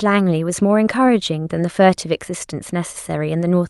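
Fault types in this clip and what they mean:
Nothing stood out on listening to this speech clip; it sounds like ordinary audio carried over a call connection.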